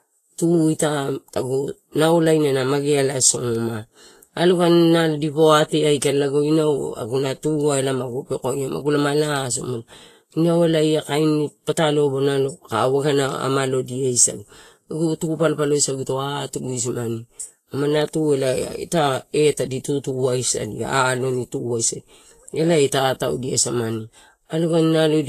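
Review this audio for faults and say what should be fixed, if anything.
Throughout the speech the treble sounds hissy and grainy, with roughened tones and softened consonant attacks. This is likely Vorbis compression at a low setting, consistent with a bitrate around 33 kbps. The encoder keeps a smooth spectral outline but quantises the fine high-frequency detail so coarsely that it turns into noise of similar energy, and it discards everything above 14.2 kHz. On a spectrogram this shows as a hard ceiling at 14.2 kHz and speckled, smeared texture below it. To prevent it, encode from the original source at a higher bitrate or with a lossless format.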